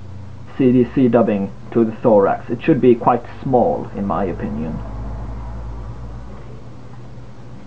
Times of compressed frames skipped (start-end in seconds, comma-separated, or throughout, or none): 5.26